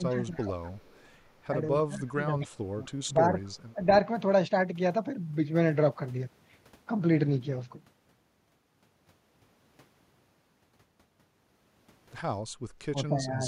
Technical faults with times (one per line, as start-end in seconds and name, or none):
0.00-0.51 speech suppressed in double talk
0.39-1.09 echo leak
1.51-3.39 speech suppressed in double talk
2.41-2.58 echo leak
3.01-3.09 echo leak
3.46-3.72 echo leak
3.74-3.88 speech suppressed in double talk
12.91-13.46 speech suppressed in double talk